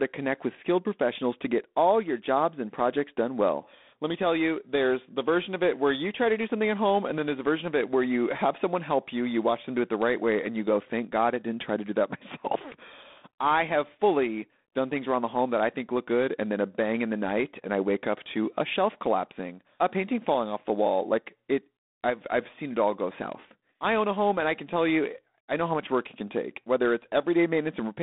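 G.726 ADPCM coding runs through the whole speech clip. The codec sends only a few bits per sample, encoding the difference between each sample and an adaptive prediction. Here the coarse steps leave a harsh, rasping hiss that rises and falls with the speech level, which fits the 24 kbit/s rate. The band is held to roughly 200 Hz to 3.6 kHz, and nothing passes above 3.8 kHz, so the sound is thin and telephone-like.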